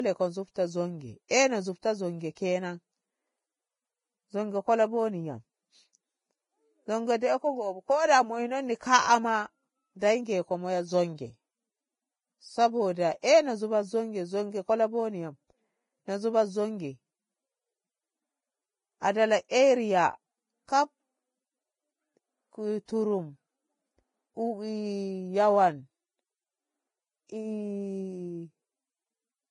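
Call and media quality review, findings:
Speech dull and band-limited throughout, nothing above 10.6 kHz, smeared low-bitrate artefacts: likely low-bitrate audio saved at a high bitrate, earlier coarse encode persisting through high-bitrate MP3-style re-encode.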